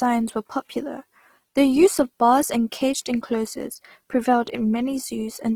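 Throughout, the speech sounds rough, grainy and noisy, likely from Opus compression, its CELT mode noise-filling starved bands at a rate that fits 16 kbps.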